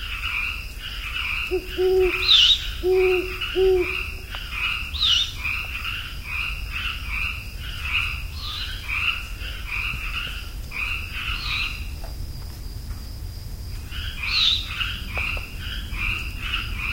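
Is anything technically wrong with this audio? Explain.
No, nothing stood out as a technical problem when listening to this recording of sounds.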